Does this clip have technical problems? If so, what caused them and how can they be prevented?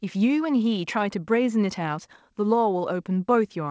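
No, nothing in this speech clip needs fixing.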